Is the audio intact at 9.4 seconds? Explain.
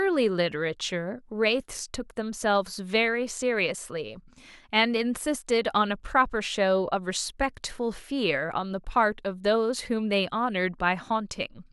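Yes, the speech at 9.4 seconds is intact, with no audible fault at that moment.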